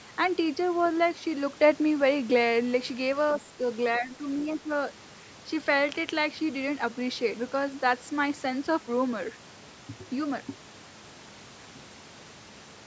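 Speech, carried over a call. From 0.85 to 0.89 s a faint scrap of a second voice sits well below the talker. That is likely the other side's voice leaking through an incomplete echo canceller. The talker's level then sags briefly three times: 3.52 to 3.59 s, 3.99 to 4.23 s, and 4.60 to 4.69 s. The last dip is deepest, around 10 dB. This is likely speech suppressed in double talk, with the talker turned down along with the loudspeaker echo.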